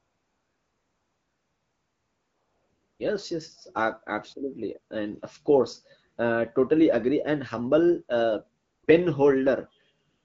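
AMR comfort noise fills 0.00–2.99 s, 8.61–8.83 s, 8.85–8.87 s and 10.09–10.25 s: with no speech frames sent, the receiver substitutes smooth synthetic noise for the real background, switching audibly in and out around the AMR-WB speech.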